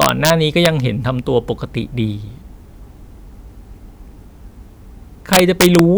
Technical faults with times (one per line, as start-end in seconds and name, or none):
0.02-0.30 integer overflow
0.65 integer overflow
5.33-5.79 integer overflow